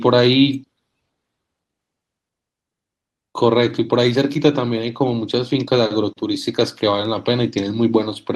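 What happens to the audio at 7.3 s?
Nothing goes wrong at 7.3 s: the speech carries on intact through that moment, with no dropout, click, distortion or other audible fault.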